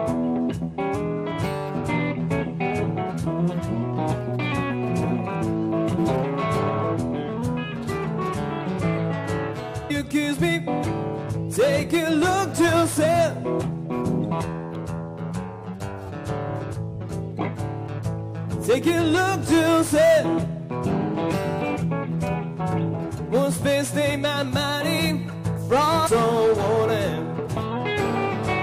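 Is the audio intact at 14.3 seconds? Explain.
No. At about 14.31 s there is damaged data in a compressed stream, lasting roughly 18 ms. Part of the encoded data at that point was corrupted, so the decoder misread or rejected the affected frame, lost sync and had to search for the next valid frame header. The result is a brief chirp, squawk, click or short hole. On a waveform it appears as a sudden break in continuity. On a spectrogram it appears as a narrow vertical glitch, either a burst of broadband energy or a thin gap.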